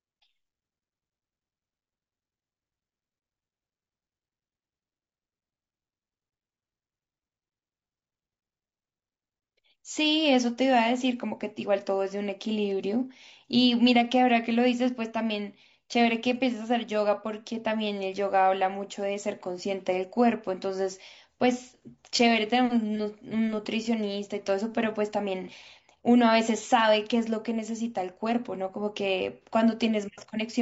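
The whole clip sounds rough and grainy, likely from low-delay AAC compression around 32 kbps; a spectrogram shows noise filling gaps between harmonics and a thinned, synthetic-looking top band.

AAC frame loss with concealment appears at 25.43–25.48 s and 29.42–29.46 s as brief smeared, noisy patches, each fitting a single lost frame; the spectrogram shows blurred, flattened columns.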